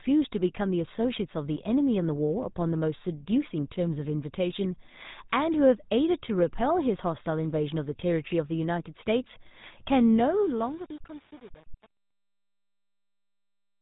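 From start to finish the speech carries plainly audible GSM full-rate codec damage. The codec rebuilds each voice from a vocal-tract model excited by a coarse, regularly spaced pulse train, which gives a buzzy, gravelly grain, and it discards everything above 3.8 kHz. The grit, rather than dullness alone, sets it apart from simple band-limiting, and it has no watery MP3-style swirl. The damage fits the 13 kbps GSM rate and persists through to the end at 13.8 s.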